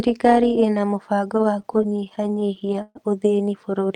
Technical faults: overlap-add ripple; repeated stalls (stutter)

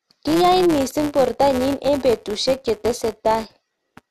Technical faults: filter restarted on every block

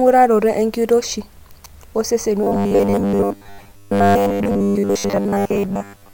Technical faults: robotic sound from repeated short buffers

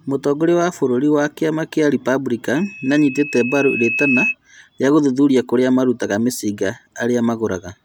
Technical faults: loudspeaker feedback squeal

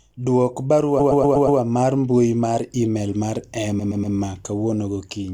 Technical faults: repeated frames

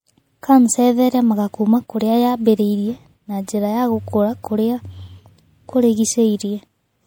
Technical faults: MP3 compression

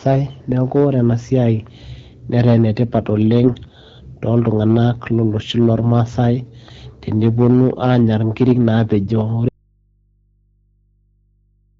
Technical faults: hard clipping; AMR bit errors; audio dropout to a faint residue

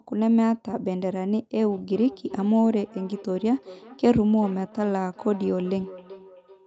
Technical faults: feedback echo between two devices

